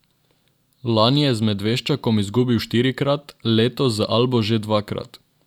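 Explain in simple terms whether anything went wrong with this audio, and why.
Nothing went wrong here.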